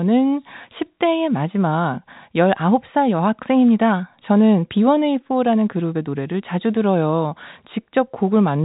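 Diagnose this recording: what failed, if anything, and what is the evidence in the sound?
Nothing stood out on listening to this speech recording; it carries the narrow telephone band with no content above about 3.8 kHz, which is simply how the telephone path sounds and not a failure.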